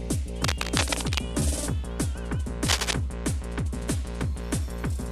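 From 0.44 to 1.20 s, and again from 2.66 to 2.94 s, a dense, irregular scratching and rustling sits over the sound at roughly the same level as the programme itself. This is cable scratch noise, likely from a worn cable, connector or control being moved, so that its contact resistance jumps about rapidly and injects uneven bursts of noise. The first episode lasts about three quarters of a second; the second is a brief quarter-second flare.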